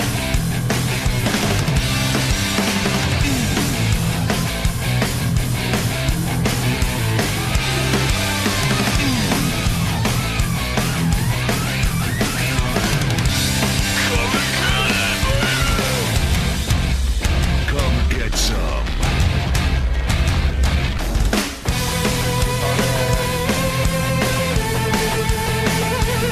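At 20.97 s there is damaged data in the compressed stream: a short run of corrupted bytes reaches the decoder, which cannot make sense of the frame there, loses its place and has to hunt for the next valid frame header before it can resume. For roughly 12 ms the output is whatever the decoder makes of that garbage, heard as a brief chirp or blip that breaks sharply into the audio and is gone almost at once.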